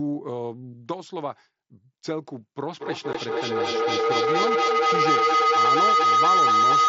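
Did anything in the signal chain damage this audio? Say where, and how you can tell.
Yes. The fault is in call processing, where a second device in the same room closes an acoustic loop from loudspeaker to microphone with more than unity gain. This is feedback howl. From 2.79 s a tone of roughly 1.5 kHz builds and runs to the end of the clip, peaking at about 9 dB above the speech. The loop's round-trip delay is roughly a fifth of a second, and each pass reinforces the frequency the loop favours.

The second fault is on the Bluetooth link between headset and phone, underneath the howl. At 3.13 s there is unconcealed Bluetooth headset packet loss: a 15 ms hole with hard edges, long enough to fit two lost voice frames. Nothing filled the gap, so the signal simply drops out and snaps back. The wideband mSBC path carries the audio on either side of the gap.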